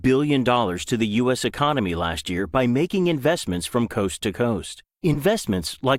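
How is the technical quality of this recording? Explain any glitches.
The recording has one clear glitch, a corrupt frame decoded near the end. From 5.14 to 5.18 s, just after "from coast to coast", a few compressed frames arrived with flipped bits and the decoder played them anyway. Misread gains and codes put energy at the wrong frequencies for those roughly 40 ms, so the speech gives way to a short, sharp burst of noise, almost a squeak, peaking near -10 dBFS.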